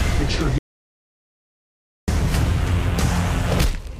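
At 0.58 s the sound cuts out abruptly and stays in silence until 2.08 s, with no room tone or hiss, so about 1.49 s is simply gone. This audio dropout to silence was likely caused by a lost input feeding silence. Unlike a gate or fade, the cut is instant and the gap empty.

From 2.58 s to the end a steady 43.1 Hz buzz rides on the sound. This is a block size mismatch (truncated), where each block is cut short before the next stage reads it, which fits 1024-sample blocks. Speed and pitch stay essentially unchanged, unlike a resampling error.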